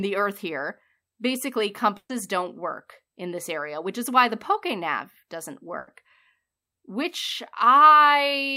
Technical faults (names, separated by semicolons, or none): burst of packet loss